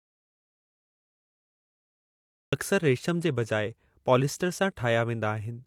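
An audio dropout to silence runs from the very start of this speech clip until 2.53 s, already under way when it begins. The opening is dead silence with no room tone, and the speech then starts abruptly, most likely because the input was lost while the recorder kept writing silence.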